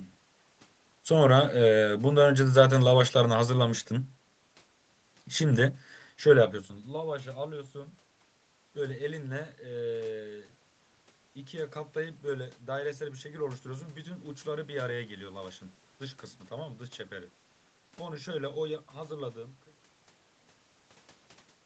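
Speech with no technical faults: the level change near 6 s is the talker shifting position at the microphone, and the smooth fade out ending at 19.84 s is an ordinary edit.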